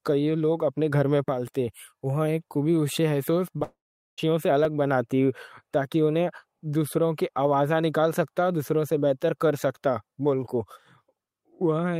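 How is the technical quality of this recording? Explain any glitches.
The speech has a cluster of glitches around three to four seconds and one more just before nine seconds.

At 3.28 s, right after "یہ خوبی اُسے", there's a small jump forward, likely a dropped buffer (overrun) losing roughly 15 ms, the two sides butted together. The same thing happens at 4.65 s and at 8.90 s, between "آوازاں نکال سکتا دوسروں" and "سے بہتر کر", each time dropping only about 5 ms.

From 3.58 to 3.60 s there's a short concealed packet loss. About 10 ms of audio never arrived, and the receiver stretched the previous sound over 13 ms, so you hear a quick smear.

From 3.63 to 4.19 s comes a long network dropout, likely from no packets arriving. The last sound is carried on as a fading buzz, then about 420 ms of near silence before the speech resumes further along, with roughly half a second missing.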